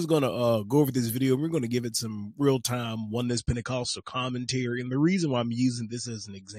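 An adaptive stream at a lower bitrate takes over at 3.29 s and holds to the end of the clip. The player has switched to a cheaper encoding of the same AAC stream, the kind of step a client makes when throughput falls. The change is abrupt but seamless, with no gap or dropout. From that point the top end vanishes, with nothing above about 9.1 kHz, and coding artefacts grow more audible. The dulled texture fits a drop from roughly 96 kbit/s to around 32 kbit/s.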